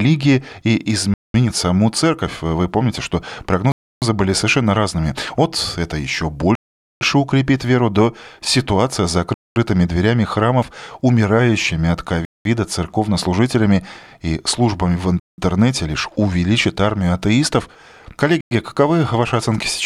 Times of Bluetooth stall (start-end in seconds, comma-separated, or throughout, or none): 1.14-1.34, 3.72-4.02, 6.55-7.01, 9.34-9.56, 12.25-12.45, 15.20-15.38, 18.41-18.51